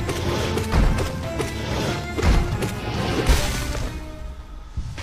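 Two short bursts of damaged data in a compressed stream break up the audio, at 0.51 to 0.57 s and again at 3.95 to 4.00 s, each lasting around 50 ms. Corrupted bytes make the decoder misread those frames and lose sync until it finds a valid header, producing a brief chirp or blip. On a spectrogram each appears as a narrow vertical smear of garbled broadband energy. In the waveform it shows as an abrupt, out-of-place patch.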